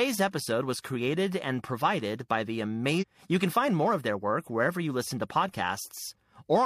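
A speech recording with one discontinuity, between 2.98 and 3.04 s. Over those 60 ms the audio breaks with a short blip and resumes at a later point in the programme, so the flow of speech jumps forward rather than pausing. This is a stream segment skipped: one chunk of a segmented stream likely failed to load, and the player moved straight on to the next segment, dropping that section of audio.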